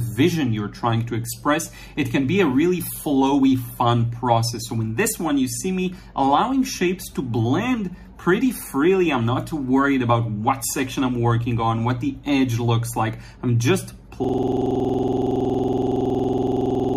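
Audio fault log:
14.24 s to the end, system hang loop: the playback freezes and one 46.44 ms slice of audio repeats exactly about 59 times at 21.5 Hz, which fits a 2048-sample ring buffer being replayed after the system stalled. At that rate it sounds like a rough, buzzing rattle rather than a tone or slow stutter. Unlike an underrun glitch, the copies are identical, there are no gaps or fresh audio between them, and the loop never recovers.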